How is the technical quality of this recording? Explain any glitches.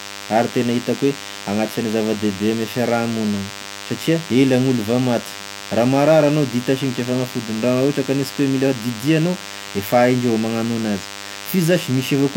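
The recording has two faults, and both run through the whole clip.

A DECT cordless phone buzz sits under the speech from start to finish. A DECT handset or base nearby sends a short radio burst every 10 ms. The audio circuitry rectifies those bursts into sound. The result is a steady, thin buzz at 100 Hz with a long row of harmonics above it. It stays roughly 15 dB below the speech.

The second fault shows in the spectrum and in the texture of the speech. The file is an MP3 at a high bitrate. Yet nothing is present above 16.3 kHz, and the speech carries the artefacts of a much lower-quality encoding. This is likely low-bitrate audio saved at a high bitrate. The damage points to an earlier pass through something like HE-AAC at 32 kbit/s. Re-encoding at 192 kbit/s only preserves what survived that first pass. It cannot restore the missing detail.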